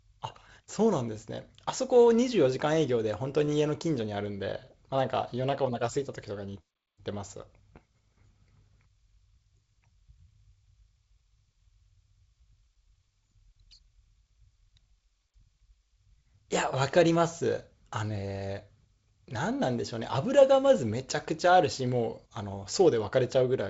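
No technical faults are present; the speech carries the character of G.722 wideband telephone coding, with content reaching to about 7.7 kHz and nothing above, and a light coding noise that fits the codec's 48 kbit/s mode.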